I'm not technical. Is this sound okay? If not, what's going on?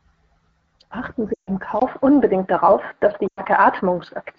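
No. There are two problems.

First, lost AMR speech frames, from 1.34 to 1.50 s and again from 3.27 to 3.41 s. Radio errors spoiled bits of the speech signal. The phone filled each gap by stretching the last good sound and letting it fade. So the speech smears and fades out briefly, for about 140 ms and then 100 ms.

Second, the input switched to a poorer device at 1.80 s. Likely the phone changed microphones, perhaps to a headset. There is a very short silence of about 20 ms. After it, the speech sounds duller, with nothing above 4.8 kHz. Its level changes a little, with faint new background noise.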